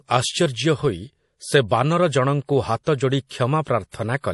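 Throughout the speech, a watery, swirling quality points to MP3 compression, likely at a low rate near 48 kbps. Nothing is present above 11.5 kHz, so a spectrogram shows a hard ceiling there, with weak high bands flickering on and off from frame to frame.

Pre-echo appears at 2.83 to 2.87 s, 3.27 to 3.31 s, 3.62 to 3.67 s and 3.89 to 3.93 s. Each time, coding noise spreads 31 to 41 ms ahead of a sharp onset, heard as a brief hiss before a softened attack. The waveform shows fuzz before each transient.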